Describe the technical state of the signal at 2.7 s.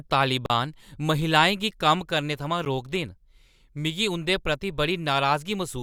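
A sharp tick interrupts the audio at 2.65 s, right after "गी कम्म करने थमां". It is a block of digital silence about 10 ms long. The sound cuts out and returns with no fade, and a gap this short is heard as a tick rather than as silence.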